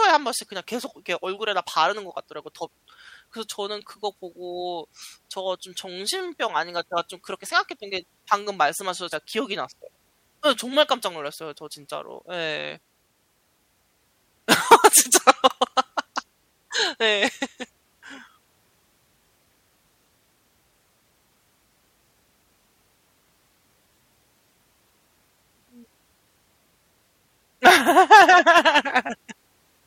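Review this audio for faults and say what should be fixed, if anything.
No faults can be heard anywhere in the recording. Nothing needs to be fixed.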